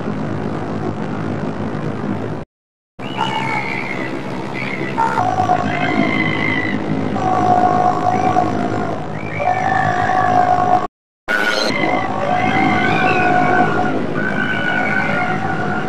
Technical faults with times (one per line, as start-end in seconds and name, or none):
2.43-3.00 playback stall
3.00-5.19 catch-up at higher speed
10.85-11.29 playback stall
11.29-11.70 catch-up at higher speed